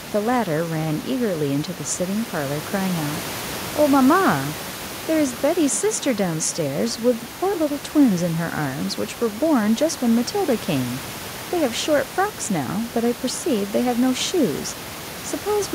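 No technical faults occur anywhere in this recording.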